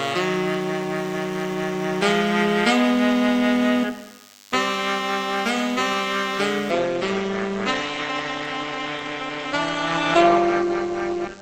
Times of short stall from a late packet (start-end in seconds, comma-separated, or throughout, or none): none